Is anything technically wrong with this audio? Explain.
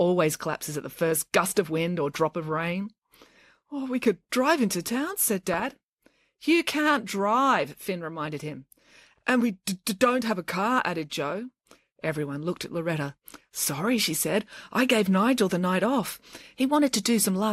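Yes, there is DAB burbling at 2.51 to 2.57 s, 5.53 to 5.67 s and 7.56 s: bit errors from weak reception slipped past error correction, corrupting MP2 sub-band data, so the speech briefly picks up short blips of noise.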